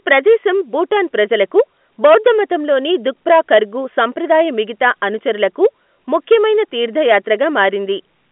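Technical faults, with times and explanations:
0.11–0.49, 0.96–1.60, 2.05–2.31, 3.30–3.58, 5.43–5.66, 6.15–6.35 and 7.11–7.65 s: hard clipping. Loud speech peaks overdrive a stage by about 2 to 10 dB and are cut flat, adding harsh high harmonics. It is crackle on peaks, becoming a harsh fuzz where the overdrive is largest.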